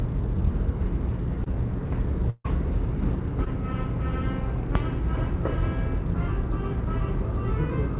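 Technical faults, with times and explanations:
1.44 to 1.48 s and 3.44 to 3.48 s, short concealed packet loss: about 20 ms of audio arrived too late for the decoder each time, and the receiver covered the hole by extending the preceding sound before blending back. This leaves a brief smear or wobble, with a fleeting sound possibly lost.
2.30 to 2.46 s, burst of packet loss: several consecutive packets went missing, about 140 ms in all, and the receiver stretched the last sound over roughly 144 ms while fading it, ending in about 30 ms of silence. The result is a held buzz or dying hiss, then the sound resumes with that stretch gone. Through the G.711 mu-law call path at 64 kbps, nothing above 4 kHz is heard.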